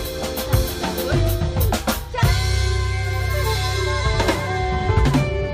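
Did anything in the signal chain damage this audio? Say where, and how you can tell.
No, nothing in the signal chain damaged this audio.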